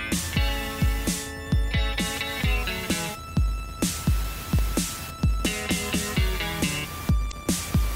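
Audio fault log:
4.46–4.83 s, CD scratch ticks: four tiny ticks, roughly eight a second, each only a millisecond or so, where the player patched over samples the error correction couldn't rebuild.
7.28–7.33 s, damaged data in a compressed stream: a short blip where corrupted bytes threw the decoder off, so it misread frames before finding sync again.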